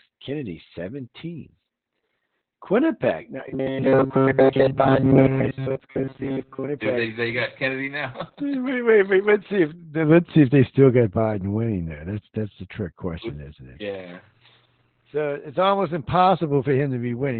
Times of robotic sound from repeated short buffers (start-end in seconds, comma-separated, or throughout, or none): 3.48-6.68